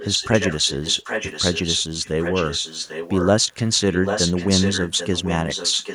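From 0.00 to 1.83 s, 2.04 to 3.28 s and 3.91 to 5.94 s, a delayed copy of the speech trails the original by about 790 ms, only a little quieter than the direct sound. At 3.49 to 3.56 s a faint scrap of it slips through. This echo leak likely comes from a loudspeaker-to-microphone path at the far end that the echo canceller failed to suppress. Unlike room reverberation, it is a distinct repeat, not a smeared tail.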